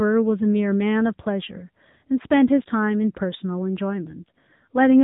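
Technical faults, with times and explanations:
Throughout, AMR narrowband mobile codec: the speech sounds thin and boxed-in, with a plainly audible buzzy, synthetic edge, and nothing reaches above 3.8 kHz. The signal was squeezed through the narrowband mobile speech codec, which resamples to 8 kHz and rebuilds the voice from a vocal-tract model driven by a few pulses per subframe. The degree of roughness fits one of AMR-NB's middle modes, near 8 kbit/s, where too few bits remain to shape the excitation naturally.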